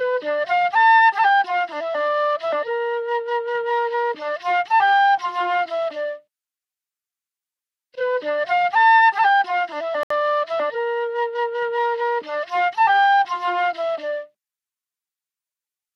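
A recording of everyday sounds with a single dropout near the 10-second mark. From 10.03 to 10.11 s the audio cuts abruptly to silence for about 71 ms, then resumes. This is a Bluetooth stall. The likely cause is radio interference delaying packets on the wireless link, so the headphones' playback buffer drained before the retransmitted data arrived and output halted until it was refilled.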